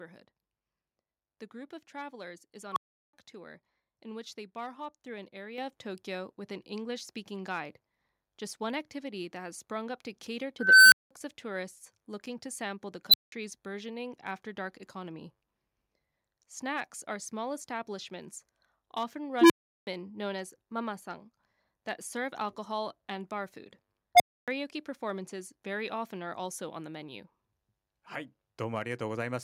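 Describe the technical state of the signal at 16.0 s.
At 16.0 s the speech signal is intact, with no audible dropout, clipping, distortion or other technical fault at that point.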